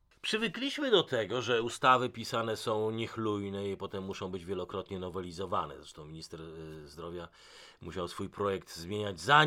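A speech recording, with nothing technically wrong with it.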